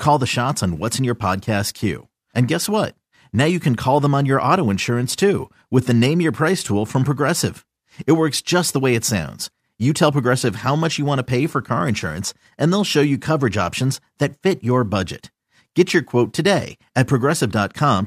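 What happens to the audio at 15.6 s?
Nothing goes wrong at 15.6 s; the speech there plays through intact, with no dropout, glitch or other fault at that point.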